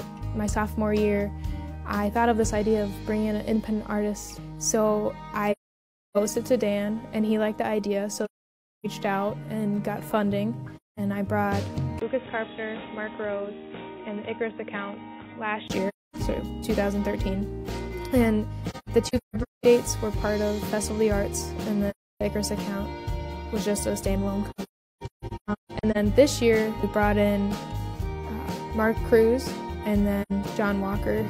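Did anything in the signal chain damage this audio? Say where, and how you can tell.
Yes. At the codec stage, AAC frame loss with muting leaves soft-edged holes at 5.52–6.17, 8.25–8.86, 10.76–10.99, 15.88–16.16, 18.70–19.65, 21.90–22.21, 24.50–25.97 and 30.22–30.32 s. The last two longer spans are broken into scattered gaps. The decoder zeroed the missing spectra and overlap-add faded each edge, unlike a hard dropout.

From 11.99 to 15.70 s the sound turns dull, with nothing above 3.8 kHz, a level drop of about 5 dB and a new noise floor roughly 50 dB down. A 20 ms silence marks the switch. The likely cause is an input switched to a poorer device; a codec low-pass would not bring new noise, a level shift and a gap.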